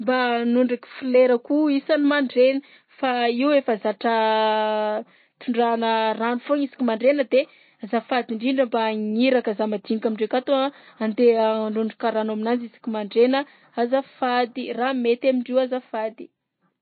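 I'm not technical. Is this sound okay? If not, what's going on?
No. The speech has MP3 compression damage from start to finish: nothing comes through above about 4.6 kHz, so s sounds are dull, and weak detail flickers in and out, giving a watery, swirly quality. This is likely from saving the file at heavy compression.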